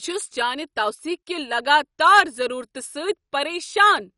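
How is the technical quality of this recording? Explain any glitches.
The quality is poor throughout, with MP2 compression damage plainly audible across the speech. The likely cause is an MPEG Layer II encoder given too few bits, consistent with a rate around 48 kbps. Starved of bits, it switches off the upper sub-bands entirely, so nothing remains above about 11.3 kHz, and it quantises the surviving bands coarsely as their allocations flicker. The speech sounds dull, with a gurgling, granular roughness like low-rate digital radio.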